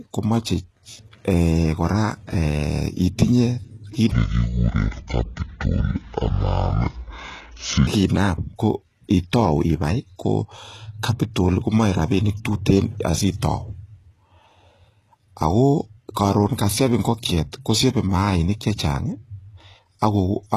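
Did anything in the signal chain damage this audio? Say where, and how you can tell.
Yes. The damage sits in three places, two of them in the codec stage.

HE-AAC compression runs through the whole clip, most likely applied at a very low bitrate, roughly 16 kbps. The treble is gritty and metallic, with s sounds turning lispy. The highs are synthesised by copying lower bands upward, so their harmonics don't line up with the body of the voice. Plain low-pass filtering would sound dull rather than bright-but-wrong.

From 4.11 to 7.87 s, a section at the wrong speed plays at 0.578 times normal rate. Pitch drops by about ten semitones and the speech drags, then snaps back at 7.87 s. Because speed and pitch fall together, this is likely a resampling or clock mismatch at playback or editing, not a pitch-shift effect, which would keep the timing intact. The abrupt boundaries confine it to one segment.

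Pre-echo appears from 11.69 to 11.72 s, just before "moe rapinik". A hiss about 24 ms long runs ahead of the sharp onset, and the attack itself sounds softened. The transform codec spread quantisation noise across a block in which the transient landed late, so noise fills the quiet moment before it. Room echo or reverb would trail after the sound, not lead it.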